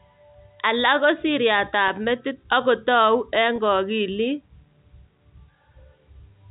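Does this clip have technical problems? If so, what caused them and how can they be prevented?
Yes. Packet loss with pitch repetition occurs at 1.88–1.90 s and 3.56–3.58 s: each time about 20 ms of speech, likely a single packet, went missing, and the receiver repeated the previous pitch period, giving a brief buzzy hold beneath the narrowband G.711 telephone sound. A jitter buffer with redundancy or forward error correction on a more stable network connection would prevent these gaps.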